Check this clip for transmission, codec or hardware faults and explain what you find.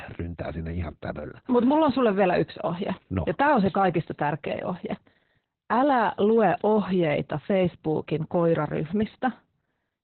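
One fault runs through the whole clip: Opus voice compression. The speech sounds muffled, hoarse and slightly robotic throughout. That fits Opus in SILK mode at about 8 kbps, cutting the audio to narrowband and coding the excitation coarsely, so the damage is heavy.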